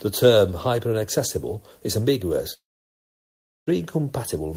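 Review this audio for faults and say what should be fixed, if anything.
From 2.53 s to 3.70 s the speech stops. The last sound trails off as a brief fading buzz or hiss, then about 1.06 s of near-silence, and speech resumes with roughly 1.14 s lost. This is likely a long network dropout, where no audio arrived and the receiver's concealment ran out. Preventing it calls for a more reliable network path, with redundancy or forward error correction to cover lost stretches.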